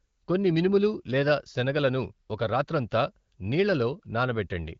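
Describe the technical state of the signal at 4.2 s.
At 4.2 s the speech is intact and no fault is present; it passes through the AMR wideband (HD Voice) codec at a rate high enough to keep it clear, with nothing heard above about 7.3 kHz.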